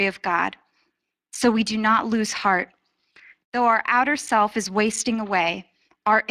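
From start to finish the speech has a rough, hoarse grain, with a plainly audible noisy haze riding on every syllable and a top end that sounds hissy rather than crisp. This is Speex codec damage. The CELP coder cannot spend enough bits on the excitation, so the detail of the voice is lost, and the band above 8 kHz is rebuilt as shaped noise. The result points to a setting around 22 kbps.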